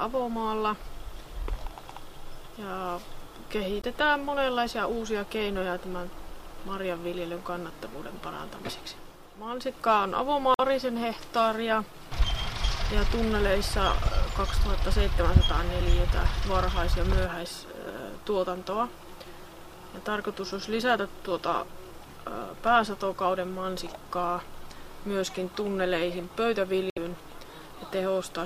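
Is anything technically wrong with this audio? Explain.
Yes. Damaged data in a compressed stream at 3.80–3.86 s, 10.54–10.60 s and 26.89–26.98 s: corrupted frames make the decoder lose sync, leaving a chirp, squawk, click or brief hole.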